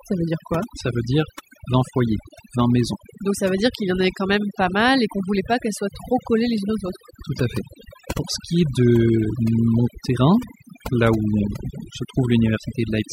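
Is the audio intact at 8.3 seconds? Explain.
No. At 8.3 seconds the speech carries overdone noise removal, present throughout the clip rather than at that moment alone. The suppressor, set too aggressively, drops individual frequency bands near its noise estimate, taking quiet speech detail with them. The background drops and breaks up into twinkling specks.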